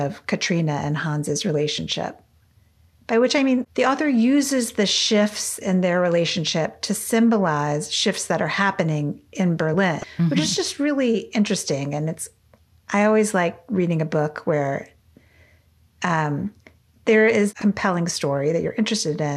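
At 10.01 to 10.04 s and again at 17.58 to 17.62 s there's damaged data in the compressed stream: the decoder loses sync on corrupted frames, producing brief glitches.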